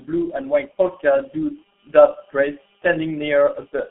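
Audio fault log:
throughout: G.723.1 codec. The sound is confined to roughly 250 Hz to 3.4 kHz and coded at 6.3 kbit/s, so it is muffled and hoarse. The slowly updated voice model and 30 ms frames smear consonants, and the damage is heavy.
0.72–0.75 s: VoIP packet loss concealed by the speech codec. One 30 ms frame is missing. The decoder fills it by carrying on from its last pitch and filter at falling gain, so the sound briefly turns into a buzzy tone or coloured noise that fades.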